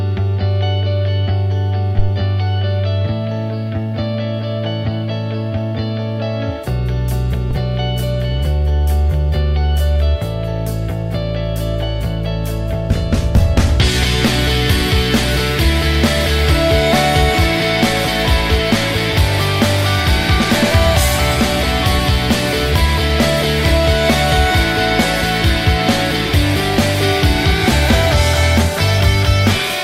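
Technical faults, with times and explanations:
1.99–2.12 s and 7.51–7.58 s, phantom power thump: a supply voltage was switched on a live input, and that sudden DC step passed through the coupling capacitors into the signal path. Each event is a deep, low-frequency thump over the audio. The first dies away over about 30 ms and the second over about 17 ms, as the capacitors settle to the new voltage.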